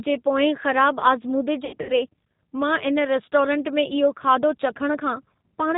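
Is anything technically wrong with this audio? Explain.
Yes, two faults are audible in this speech clip.

G.729 coding runs through the whole clip, and the sound is consistent with the G.729A variant at 8 kbit/s. The codec rebuilds each 10 ms frame from a vocal tract filter, a pitch predictor and a handful of pulses, and discards everything above 4 kHz. The damage is plainly audible: the speech is muffled and band-limited, with a rough, slightly synthetic texture.

VoIP packet loss concealed by the speech codec occurs from about 1.65 to 1.92 s. About 180 ms of audio is missing, scattered over roughly 240 ms, with the longest gap 80 ms. That pattern points to around nine lost packets. The decoder fills each gap by extending its last pitch and filter at falling gain, so the speech smears into a buzzy tone or coloured noise that fades. Because each frame depends on the one before, the sound stays weak or distorted for a moment after the packets resume.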